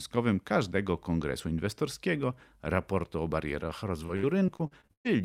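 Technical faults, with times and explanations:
3.59–5.07 s, repeated packet loss (robotic sound): after "kongresu inwestorskiego raportu o", eight gaps break the speech, the longest 117 ms, about a fifth of the stretch. Each hole is filled by extending the previous sound, so it turns choppy, with pieces missing.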